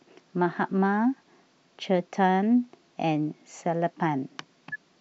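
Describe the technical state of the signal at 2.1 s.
At 2.1 s the speech signal is intact, with no audible fault at that point.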